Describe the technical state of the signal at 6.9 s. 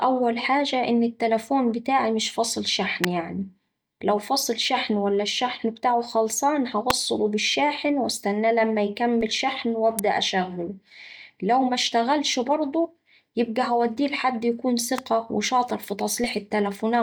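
A nearby switch or motor likely arced onto the audio line at 6.90 s, causing an electrical switching spike: a sharp snap laid over the speech between "ولا الشحن بتاعه خلصان" and "بالشاحن واستناه لما".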